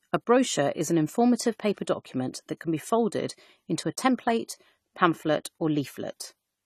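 Throughout the speech, nothing sounds above 14 kHz, and a swirly, smeared texture clings to it. This is low-bitrate audio saved at a high bitrate. A likely earlier low-bitrate encode left damage that the later high-bitrate MP3 cannot undo.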